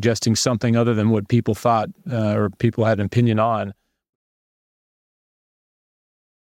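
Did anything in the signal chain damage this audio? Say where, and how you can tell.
No, nothing in the chain has damaged this speech, and the only level change is a smooth fade-out that starts at roughly 3 s and reaches silence at 4.16 s without any click or hard edge, as a deliberate edit would.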